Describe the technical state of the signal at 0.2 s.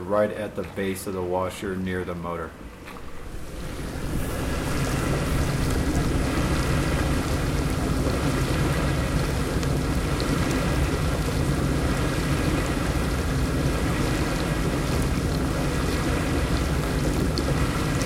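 At 0.2 s the signal is in hard clipping, which runs from 0.17 to 0.20 s, about 30 ms in all. The peaks exceed the stage's maximum level by about 2 dB, so their tops are sliced flat rather than rounded. Those squared-off crests generate harmonics high above the original content. With an overload this slight and this short, the result is a brief crackle on the loudest part of the sound, not a sustained fuzz.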